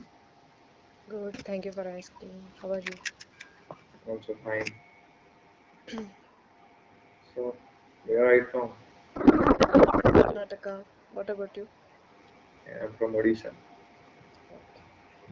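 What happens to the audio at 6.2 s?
Nothing goes wrong at 6.2 s: the speech there passes through intact, with no fault to be heard at that moment.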